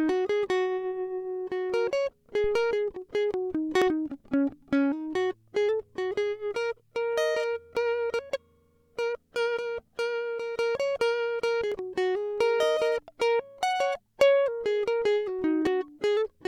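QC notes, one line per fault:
2.44–2.77 s: phantom power thump. A supply switched on or off on the live input pushes a step through the coupling caps, giving a deep thump under the music that dies away in about 75 ms.
3.82, 7.77, 11.72, 15.67 s: audio missing between chunks. The music skips about every 4 seconds, losing around 50 ms each time, likely from a short piece dropped at each chunk boundary.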